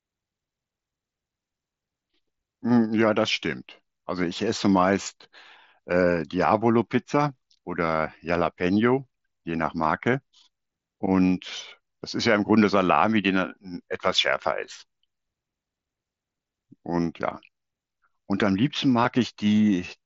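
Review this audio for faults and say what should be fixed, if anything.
Concealed Bluetooth headset packet loss occurs at 5.03 to 5.06 s, a 30 ms gap consistent with four consecutive lost 7.5 ms frames, heard as a brief buzzy, held tone with a slight warble as real audio resumes. Single losses at 7.29, 17.30 and 19.04 s are nearly hidden. From 14.64 to 14.70 s, three short losses are scattered across 60 ms. In each case the receiver filled the gap by repeating the best-matching stretch of recent waveform, on the wideband mSBC link. To prevent it, keep the headset close to the phone with a clear line of sight and reduce 2.4 GHz interference.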